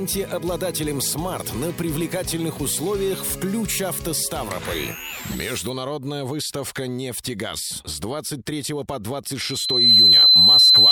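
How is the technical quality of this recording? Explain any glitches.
Near the end there is a loudspeaker feedback squeal from 9.39 s to the close of the clip. A microphone is re-capturing its own loudspeaker, and the loop gain at 4 kHz exceeds one, so that single tone swells over roughly half a second to around 15 dB above the audio. Unlike a steady interference whine, it builds from nothing.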